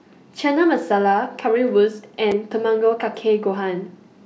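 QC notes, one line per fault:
2.32 s, block of digital silence: a 5 ms stretch of the speech drops straight to zero and comes straight back with no fade. Both hard edges land so close together that you hear a single sharp tick rather than a gap, likely from an output buffer that wasn't filled in time.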